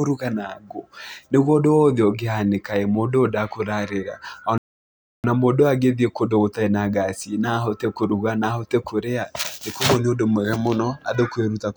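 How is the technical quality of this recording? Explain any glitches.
There's one real glitch worth flagging in the speech. From about 4.58 s to 5.24 s the audio just drops out, roughly two thirds of a second of dead silence in mid-flow, then picks back up. That's a playback stall: most likely the player ran dry of buffered data or its audio thread got held up, so nothing reached the output until it caught up. You hear a clean gap, like someone briefly pausing the tape.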